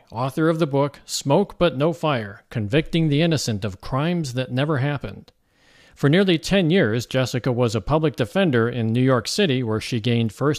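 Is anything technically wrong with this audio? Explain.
No, nothing technical stands out here; the speech comes through without any glitches or problems worth flagging.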